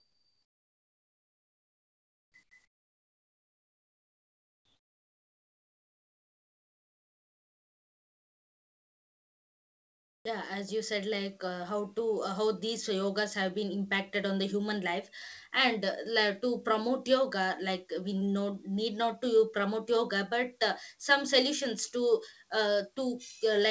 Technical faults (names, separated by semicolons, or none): comfort noise in place of the background